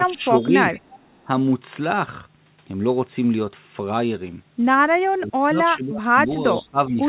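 From 0.0 to 0.54 s the speech is suppressed in double talk: over roughly a third of a second it dips by up to about 10 dB, likely because an echo canceller muted the near talker while the far side spoke. On a waveform the envelope sags; on a spectrogram the energy fades. Echo leaks appear at 0.36–0.48 s and 0.74–1.21 s. They are faint copies about 25 dB down, trailing the speech by 409 ms and likely left behind by incomplete cancellation. They show as weak, repeated formant traces, all under the call path's 4 kHz ceiling. From 5.07 to 6.29 s the suppression is much deeper, near 30 dB across about a second, and appears as a near-silent hole in the waveform. A brief echo scrap follows at 6.53–6.61 s, while a further dip of about 15 dB runs from 6.53 to 7.01 s.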